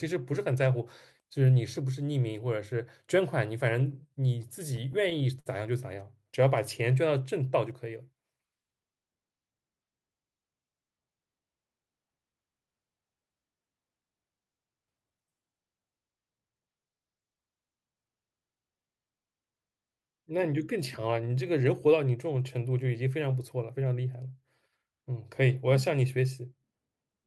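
From 3.91 to 5.49 s, late-arriving packets kept draining the jitter buffer, causing repeated stalls (stutter): nine held-over pauses up to 60 ms, making the speech drag and stutter.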